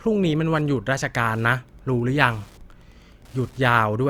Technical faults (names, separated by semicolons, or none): Wi-Fi interference; sample clock jitter